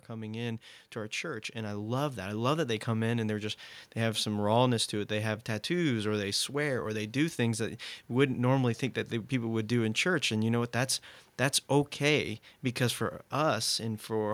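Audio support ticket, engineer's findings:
Automatic gain rising, 0.08 to 3.66 s. Level climbs about 10 dB. Speech and background swell together. AGC judged input too quiet, ramped gain up.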